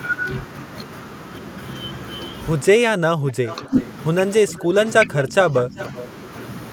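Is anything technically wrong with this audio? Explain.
Yes. The speech has two recurring call-processing faults.

Speech suppressed in double talk occurs at 2.84–3.46 s, 3.65–3.73 s, 4.42–4.75 s and 5.05–5.78 s. The voice dips, deepest near 25 dB in the first stretch. Likely cause: an echo canceller confusing overlapping talk with echo and ducking everything.

Echo leak appears at 3.47–3.86 s, 4.51–4.63 s and 5.78–6.02 s. A faint copy of the voice returns 381 ms late, about 15 to 25 dB below the speech. Residual loudspeaker pickup likely slipped past the far end's echo canceller.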